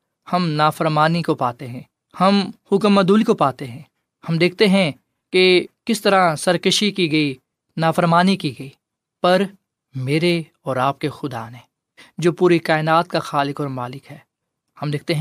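At 3.21 to 3.23 s, compressed frames are skipped. A couple of whole frames, each 23.2 ms long, never reach the decoder's output. The audio jumps ahead by about 50 ms.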